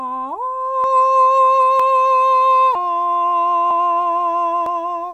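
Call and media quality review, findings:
Audio missing between chunks: abrupt skips at 0.84, 1.80, 2.75, 3.71 and 4.66 s, roughly every second, each losing about 40 ms of music; likely chunked recorder dropping samples at buffer handover.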